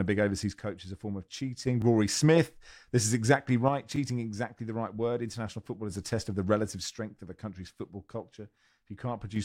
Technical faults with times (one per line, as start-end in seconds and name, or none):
0.60-1.67 one channel drops out
1.82-1.84 repeated buffer
3.69-5.90 one channel drops out
3.96-3.98 repeated buffer
6.96-9.36 one channel drops out